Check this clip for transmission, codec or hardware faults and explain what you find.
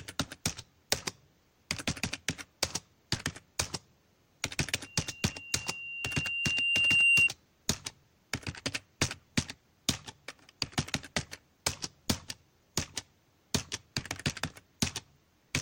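One fault: a loudspeaker feedback squeal from 4.83 s to 7.3 s. A microphone was picking up the loudspeaker it fed, and around 2.8 kHz the loop gain rose above one. That frequency reinforced itself over roughly two seconds, swelling into a steady, piercing squeal that ends up roughly 10 dB louder than the surrounding sound.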